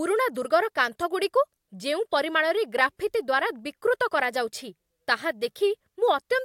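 No technical faults are audible.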